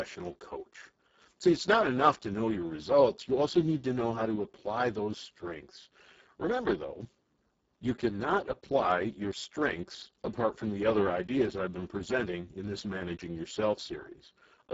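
From start to finish the speech carries the sound of the Speex codec at a very low quality setting. The heavy damage points to a bitrate near 6 kbps. With so few bits left for the excitation signal, the voice turns noisy and hoarse. Nothing is present above 7.7 kHz.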